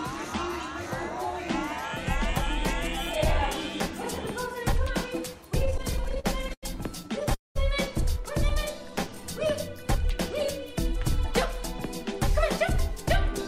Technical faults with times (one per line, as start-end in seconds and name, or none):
5.65-6.65 repeated stalls (stutter)
7.03-7.32 repeated stalls (stutter)
7.34-7.57 call audio freeze
8.84-10.46 jitter buffer slow-down